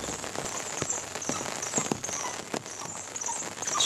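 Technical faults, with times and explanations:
0.38 to 0.60 s, processor overload crackle: the processor falls behind and misses a string of buffer deadlines in quick succession, and each missed block is skipped outright rather than filled. The sound is chopped by many tiny silent gaps with hard edges, heard as a gritty, tearing crackle over the sound. The spacing of the breaks points to buffers of around 10 ms, with something like fifteen of them dropped before the load eases and the crackle stops.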